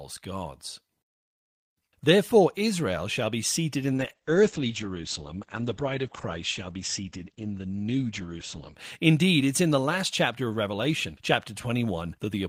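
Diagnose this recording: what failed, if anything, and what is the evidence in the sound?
From 3.95 s, right after "shall be seated in", the speech turns muffled and coarse, losing everything above about 8 kHz, and stays that way until 8.83 s, when the full band returns. This is a call bitrate drop in the codec stage. The call's bandwidth estimate fell, so the encoder was told to spend far fewer bits for nearly 5 seconds. The coarser coding and the narrowed band fit a fall from roughly 32 to 11 kbps.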